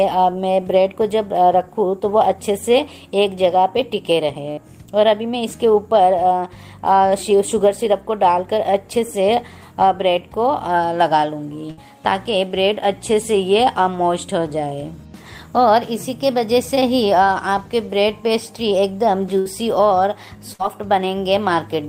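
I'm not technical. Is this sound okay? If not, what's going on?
No. A burst of packet loss occurs at 4.51, 11.71, 19.39 and 20.53 seconds. Each time, about 60 ms of audio never arrived, so the player stretched the last sound into a brief fading buzz or hiss, then skipped ahead.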